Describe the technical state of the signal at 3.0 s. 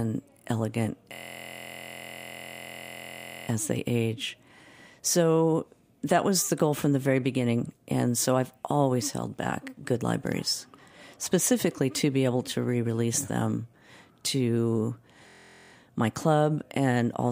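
At 3.0 s the signal is inside a system hang loop running from 1.14 to 3.48 s. The machine or its audio driver stalled while the sound hardware kept replaying the same ring buffer, so one 23.22 ms slice of speech, which fits a 1024-sample buffer, repeats exactly about a hundred times. Because the slice is so short, it is heard as a steady buzz at 43.1 Hz rather than a stutter. Normal speech resumes with "as they age".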